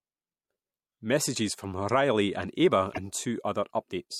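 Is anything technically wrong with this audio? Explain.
Yes. From 2.89 to 2.98 s the speech is broken by damaged data in a compressed stream: a stretch of the encoded file was corrupted, so the decoder misread the frames there, lost sync and hunted for the next valid frame header. It comes through as a short chirp, squawk, click or hole lasting about 90 ms.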